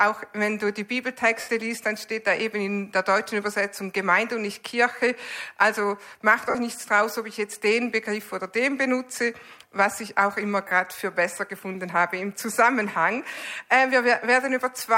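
Lost LE Audio frames at 1.40 to 1.49 s, 6.50 to 6.55 s and 10.68 to 10.71 s: the LC3 decoder filled each gap by replaying the last spectrum with scrambled signs, smearing tones into noise. The 0.08 s gap, about eleven 7.5 ms frames, fades after its first few frames. Light lossy compression is also present, with only slight damage.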